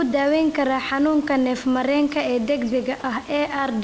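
At 3.00 to 3.04 s, about 40 ms of the speech gives way to a flat, steady hiss, most likely sound dropped by the voice detector, which judged a quiet stretch as background and stopped sending, so comfort noise filled the gap and about 20 ms of real sound was lost. On a waveform the envelope collapses to a thin, even band; on a spectrogram the speech harmonics vanish into uniform grey noise. That brief gap sits against room noise about 26 dB below the speech and, across the whole clip, nothing above 8 kHz from the call codec.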